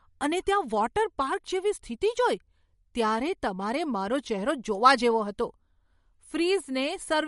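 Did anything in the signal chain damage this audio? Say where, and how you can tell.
Yes. The damage runs through the whole speech clip and sits at the codec stage. Nothing is present above 11.2 kHz, and the sibilants carry a swirly, watery texture with metallic chirps as quiet detail blinks in and out between frames. That points to MP3 compression, likely at a low bitrate around 48 kbps. A plain low-pass filter or narrowband link would cut the top just as hard but leave what remains steady, without that frame-to-frame flicker.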